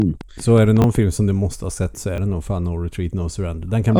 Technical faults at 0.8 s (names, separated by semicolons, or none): train of clicks; repeated buffer